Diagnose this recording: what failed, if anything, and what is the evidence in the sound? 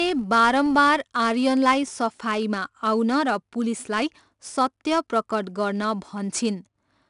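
The codec stage failed with 4-bit ADPCM compression across the whole speech clip. A gritty hiss rides on every loud passage and follows its level. Nothing is heard above 10.6 kHz. The damage is plainly audible and fits a rate near 89 kbps.

A processing filter restarted on every block from 0 to 1.16 s. Each block opened from silence with a small transient. The result is a level-following buzz at 46.9 Hz. That repeat rate fits 1024-sample blocks.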